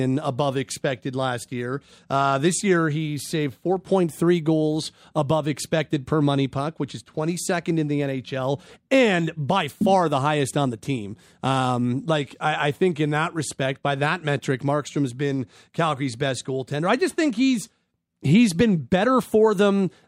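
No faults are present in this speech recording.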